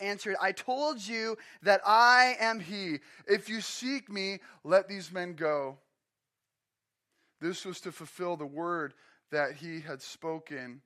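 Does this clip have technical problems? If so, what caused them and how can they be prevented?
Yes. From 2.59 s to the end, this speech is a section at the wrong speed: it plays at 0.893 times its original rate, so the voice drops by roughly two semitones and sounds slower and heavier. The likely cause is a mismatched clock, with that stretch resampled to the wrong rate. Unlike a pure pitch shift, the timing slows along with the pitch. To prevent it, match sample rates at every editing and playback stage.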